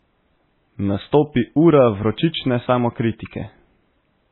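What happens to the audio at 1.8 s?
At 1.8 s the speech sounds dull. Nothing is heard above 4 kHz, and this runs through the whole clip. Two layers of coding artefacts overlap. The likely cause is transcoding between lossy codecs, pointing to a low-rate MP3 re-encoded as AAC-LC.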